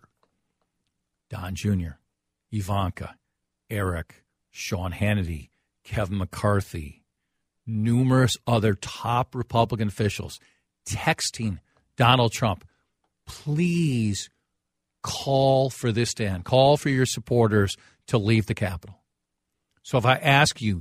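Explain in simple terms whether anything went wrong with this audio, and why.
Nothing went wrong here; the speech sounds fine throughout.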